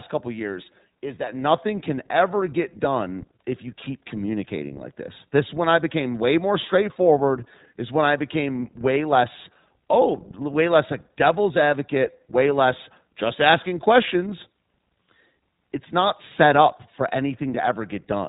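iLBC codec damage runs through the whole clip, from start to end. The speech has been squeezed through a narrowband VoIP coder that rebuilds each short block of excitation on its own, without drawing on the block before. Nothing above about 3.8 kHz survives, so sibilants lose their edge and the sound is boxed in. The damage is plainly audible as a rough, slightly synthetic texture, which fits 20 ms frames at around 15.2 kbps.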